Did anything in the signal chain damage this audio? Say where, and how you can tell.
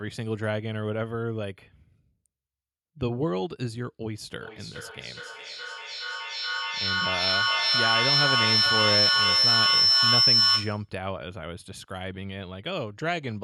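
Yes. There's a feedback howl running from 4.4 s to 10.9 s, and it sits at the playback end of the call, in the acoustic loop between two devices sharing a room. You can hear a tone up around 5 kHz swelling rather than dying away, repeating roughly every 400 ms as it laps the loop, and peaking about 8 dB above the speech. Each trip from loudspeaker back into the microphone added gain until it locked onto that one frequency.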